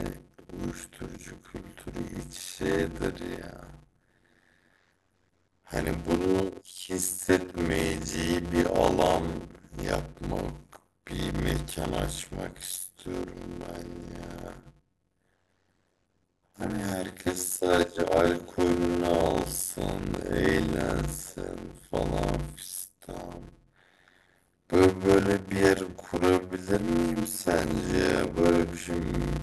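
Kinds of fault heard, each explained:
Block size mismatch (padded): one stage hands over shorter blocks than the next one reads, and the remainder of each block gets zero-filled, so a tiny silent gap lands in every block. Here it shows as a steady buzz at 91.9 Hz running under the whole speech clip, and the speech plays at 0.533 times normal speed with the timbre still intact. That fits 256-sample blocks being read as blocks of about 480.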